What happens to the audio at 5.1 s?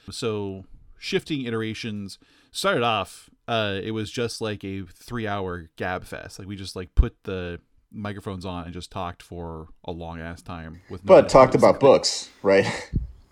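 Right after "was just like a", at 5.12 s, there is a block of digital silence. About 0.73 ms of the speech drops straight to silence and returns with no fade, which fits a block of 32 samples the program failed to fill in time. The hole is far too short to hear as a gap, so it comes across as a tick or dip. A packet-loss dropout would instead leave an audible gap or a smoothed, concealed patch.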